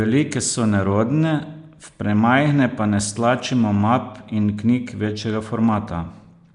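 Throughout, the speech has been run through what is likely Nellymoser compression, the old Flash microphone codec. It spends a fixed, small number of bits per sample on short blocks, leaving weak bands empty and filling them with noise, at a rate that fits about 44 kbps. The damage is plainly audible: a rough, hissy halo clings to the voice, the speech smears into an underwater murk, and nothing survives above about 10.6 kHz.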